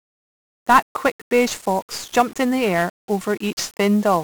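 From start to finish, the speech has passed through 1-bit DFPWM compression, heavily damaged, with the density of the grit consistent with a 48 kbps stream. Each sample keeps only a single bit, nudging a running level up or down, so the waveform is rebuilt as a coarse staircase. That crude tracking floods the whole band with quantisation noise: the speech turns fuzzy and crackly throughout, and its upper frequencies sink beneath a steady bed of hiss.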